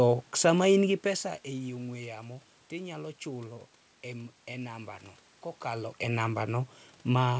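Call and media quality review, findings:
Nothing to flag here: the level dips and lifts around the 1 s and 5.5 s marks are just the talker shifting at the mic, the room noise is just the room, and the top end stopping at 8 kHz is what you'd expect from a G.722 call path.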